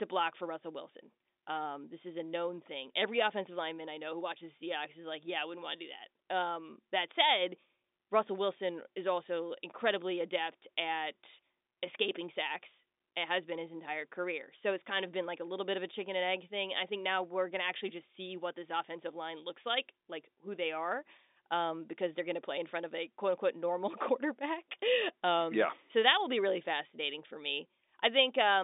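No technical faults can be heard anywhere in this speech.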